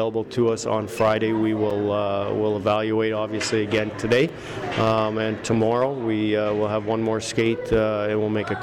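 At 1.70 s and again at 4.29 s, a block of digital silence about 5 ms long cuts the sound out and back, heard as a sharp tick.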